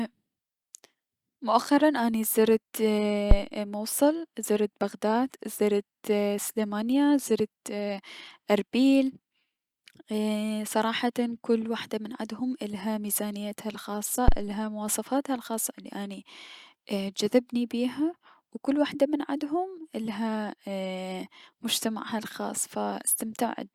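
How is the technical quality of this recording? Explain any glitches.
The recording has two phantom power thumps. The first runs from 3.31 to 3.37 s, just before "موصل زرت بغداد زرت". The second runs from 14.28 to 14.40 s, between "عدهم عدها ميزانيتها الخاصة" and "مواصفاتها الخاصة الي اني". A supply switching on or off on the live input sends a DC step through the coupling capacitors. Each is a deep thud peaking near about -5 dBFS and dying away within 12 and 27 ms.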